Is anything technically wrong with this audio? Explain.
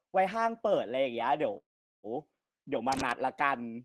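Yes, there are two faults in this speech.

From 1.57 to 2.06 s there is a call audio freeze. Packets were likely held up in transit, so the receiver's jitter buffer ran dry. It filled the gap of about 0.46 s by extending the last sound, which fades quickly and leaves roughly 0.41 s of near-silence. When the packets arrive, the speech resumes where it stopped. Nothing is lost, but everything after it is pushed about 0.46 s later.

From 2.92 to 3.14 s there is cable scratch noise. A worn cable, connector or control was likely moved, and its contact resistance changed rapidly. That produces a short patch of dense, irregular crackling and rustling, roughly 10 dB below the speech, layered over it for about a fifth of a second.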